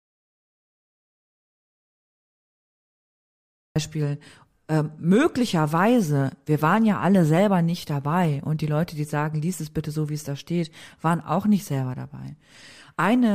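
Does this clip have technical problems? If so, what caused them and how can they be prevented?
Yes. An audio dropout to silence lasts from the start to 3.76 s: a flat waveform and an empty spectrogram with no room tone, likely caused by a lost input feed. Checking connections and monitoring input levels before recording prevents it.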